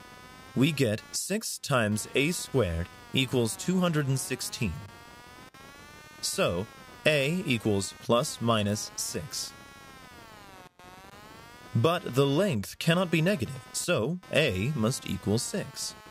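Computer activity noise runs throughout: shifting processor load disturbs the shared audio ground, adding a buzzy chirp near 200 Hz, roughly 20 dB below the sound.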